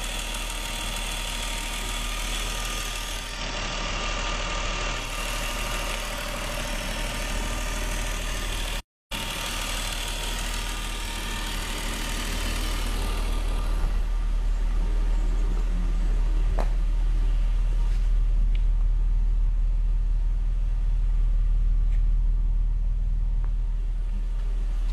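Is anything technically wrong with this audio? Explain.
Yes, there are two faults.

From 3.15 to 5.20 s the sound gains a layer of hiss, roughly 30 dB below the programme, with the level shifting by about 2 dB. This is digital radio blending to analogue: a hybrid receiver lost its digital stream and cross-faded over roughly 0.3 s to the FM broadcast of the same station. FM's noise floor explains the hiss. It then blended back.

At 8.80 s the sound cuts to silence for about 306 ms, picking up again at 9.12 s. That abrupt mid-flow gap is a playback stall, most likely the player running short of data or having its audio thread blocked, so nothing reached the output until it recovered.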